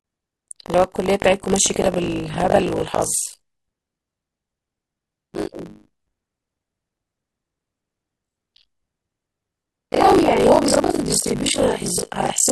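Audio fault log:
throughout, buffer tearing: a steady robotic 50 Hz rattle over the speech, as most of each 20 ms buffer replays audio from roughly 40 ms earlier.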